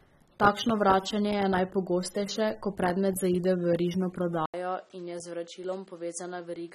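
Throughout this speech recording the sound is dull and smeared, with audible warbling and fizz and nothing above 13.3 kHz, most likely from AAC compression: AAC-LC at a low bitrate, around 27 kbps, discarding upper bands and coarsely quantising the rest. At 4.46 s there is a brief 80 ms silence, after which the audio turns narrower and a little quieter, loses everything above 10.5 kHz, and carries a new faint noise floor well below the speech until the end. This points to the input switching to a poorer device mid-recording.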